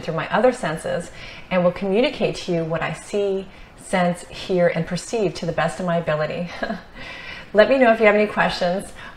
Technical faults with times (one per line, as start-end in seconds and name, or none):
none